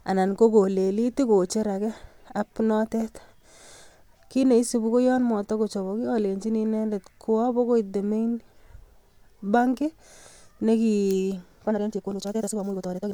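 From 11.64 s to the end at 13.13 s, the speech abruptly runs at 2.0 times its earlier pace while its pitch stays put, a time-stretched section. It sounds rushed, most likely because software squeezed this stretch to fit a length by dropping short slices. On a spectrogram, harmonic spacing is unchanged but syllables are compressed horizontally, and the waveform shows tightly packed envelopes with small discontinuities where pieces were cut.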